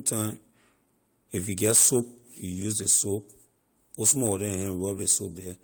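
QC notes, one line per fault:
throughout, clock drift between sender and receiver: the sender's clock runs about 1.5% slow, so the buffer drains and short repeats recur unevenly; the waveform shows duplicated slivers.
0.51–4.79 s, repeated timing corrections: small repeated pieces slow this span to 98% speed, adding roughly a tenth of a second; the spectrogram shows irregular, slightly stretched hiccups.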